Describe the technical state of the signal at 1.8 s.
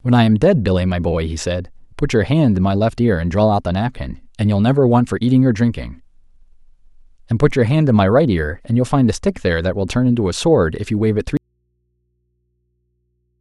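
At 1.8 s the speech signal is intact, with no audible technical fault at that moment.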